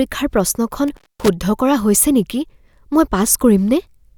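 An intermittent contact hits the speech between 0.88 and 1.29 s, where a loose plug or cable connection briefly breaks the signal path. The line stays open for about 230 ms within that stretch, so the speech drops out abruptly rather than fading. Scratchy crackle marks the moments the contact separates and then reseats, and across the gap a faint hiss remains before the speech returns.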